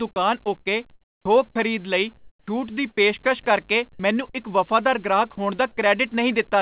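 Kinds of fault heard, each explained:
Sound dropped by the voice detector: Brief stretches of speech vanish into steady noise, likely because the sender's detector mistook them for background and stopped sending. It happens at 0.12, 1.51, 3.23 (just before "ਕਰਕੇ ਮੈਨੂੰ ਇੱਕ") and 5.35 s, each gap only 20 to 40 ms.
Sound chopped by the voice detector: From 0.6 to 1.25 s the speech breaks up repeatedly. The sender likely switched between sending and not sending several times. About 0.39 s of this stretch is replaced by synthetic fill, so the sound is choppy.
Comfort noise in place of the background: From 2.17 to 2.47 s the real background, already about 35 dB below the loud parts, gives way to a flat, featureless hiss about 21 dB quieter. This is likely the receiver's synthetic fill while the sender was silent.
Onset clipped by the voice detector: At 2.42 s the next sound starts abruptly, with its first 50 ms missing and covered by comfort noise. 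The sender's detector was likely slow to notice that sound had resumed, so the soft beginning was never sent.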